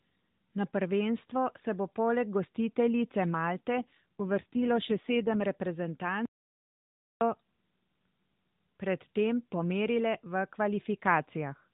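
From 3.73 to 5.46 s, an AMR rate drop moves the narrowband mobile codec to a much lower mode, consistent with 5.9 kbps instead of 12.2, so the speech turns rougher and buzzier while keeping its 4 kHz band. From 6.25 to 7.21 s, the input was likely lost and replaced with silence. This audio dropout to silence leaves about 0.96 s of total silence with no room tone before the speech resumes.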